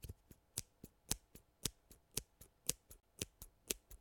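At 3.01 s the sound cuts out, a Bluetooth dropout likely caused by packets reaching the headphones too late. About 28 ms of material is lost, which fits two dropped frames, and playback resumes further on rather than picking up where it stopped, unlike a buffer underrun.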